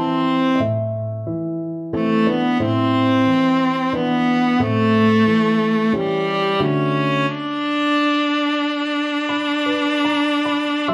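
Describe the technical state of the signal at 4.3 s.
At 4.3 s the audio is intact, with no audible fault at that moment.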